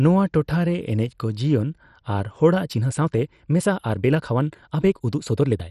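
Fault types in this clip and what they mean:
MP2 compression: throughout, the speech sounds dull and gurglingly granular, with upper sub-bands flickering on and off. The heavy damage fits a rate near 56 kbps. A plain low-pass would sound clean, so this is likely MPEG Layer II coding.
time-stretched section: from 2.63 s, right after "ᱡᱤᱭᱚᱱ ᱟᱨ", to the end, the speech runs 1.39 times faster and sounds rushed, likely from software dropping short pieces. The pitch stays unchanged, which separates it from simply playing the audio faster.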